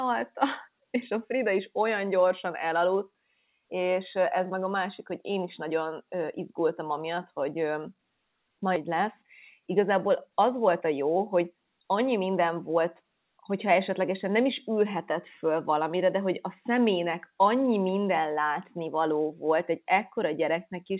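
At 8.76 to 8.78 s there is a skip ahead: about a second of audio was dropped, either in transit or by an overflowing jitter buffer, and playback jumps straight to later material with no fill. The waveform splices abruptly, and the spectrogram shows a sudden discontinuity in the speech pattern with no gap.

From 8.88 to 12.85 s a jitter buffer speed-up follows. The receiver trimmed short pitch-period slices repeatedly to shrink the excess delay, roughly 0.3 s in total, so speech runs at 106% with unchanged pitch and sounds hurried. On a spectrogram the harmonics keep their spacing while syllables arrive compressed in time. Across the clip, nothing appears above 4 kHz, which fits the G.711 A-law call path.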